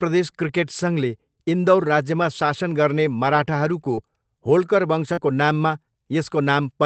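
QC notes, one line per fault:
0.47–0.49 s, 3.97–3.99 s, 5.17–5.23 s: lost packet rebuilt from error correction. One packet was lost at each of the first two times, two at the last. The next packet carried a low-bitrate copy, so nothing drops out. Those 20 ms and 40 ms stretches sound rougher and noisier.
3.95–3.99 s, just after "राज्यमा शासन गर्ने मराठाहरूको": short concealed packet loss. About 20 ms arrived too late. The decoder extended the preceding sound for roughly 17 ms, then blended back. This gives a brief smear.
5.13–5.19 s: short concealed packet loss. 40 ms was missing and all of it was filled by extending the previous sound. It comes across as a short wobble, just before the rebuilt frames.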